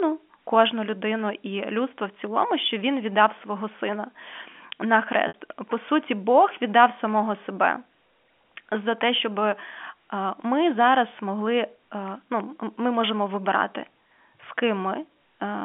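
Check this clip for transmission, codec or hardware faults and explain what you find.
One transmission fault appears in this speech, carried over G.711 A-law telephone coding. From 5.28 to 5.34 s there is packet loss with pitch repetition: about 60 ms of audio is missing, consistent with two lost packets. The receiver fills the gap by repeating the last pitch period, heard as a brief held buzz that fades toward silence over about 50 ms before speech resumes through a short cross-fade.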